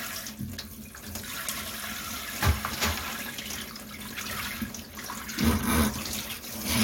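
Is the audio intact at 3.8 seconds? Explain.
Yes, the audio is intact at 3.8 seconds, with no fault present at that moment.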